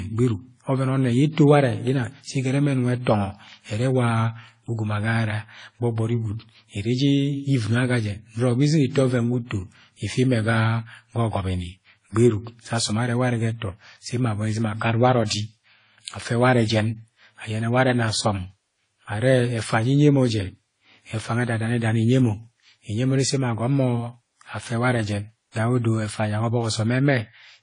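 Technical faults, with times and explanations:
Throughout: transcoding between lossy codecs. The speech has no content above 10.1 kHz and carries two overlapping sets of coding artefacts, heard together. This is likely a WMA encode re-encoded as AAC-LC, with both stages at a rate consistent with about 32 kbit/s. The second encoder spends its scarce bits reproducing the first encoder's errors, so the faults stack, and the lowest cut-off in the chain persists.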